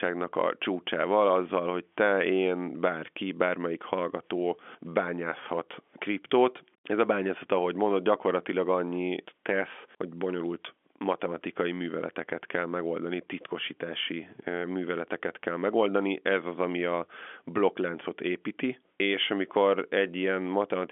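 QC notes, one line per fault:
No fault to note in this speech clip.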